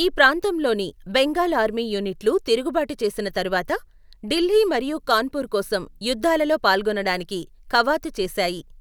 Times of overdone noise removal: none

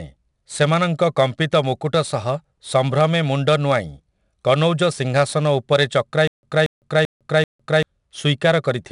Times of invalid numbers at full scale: none

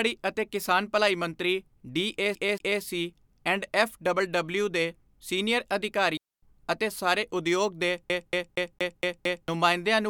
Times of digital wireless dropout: 6.17-6.42

